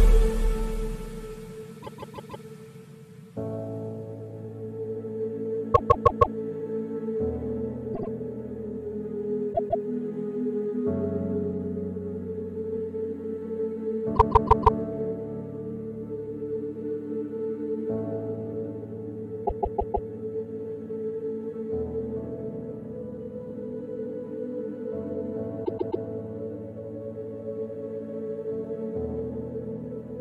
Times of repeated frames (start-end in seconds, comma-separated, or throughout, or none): 1.82-2.44, 5.74-6.36, 7.93-8.09, 9.52-9.84, 14.15-14.77, 19.45-20.08, 25.64-26.03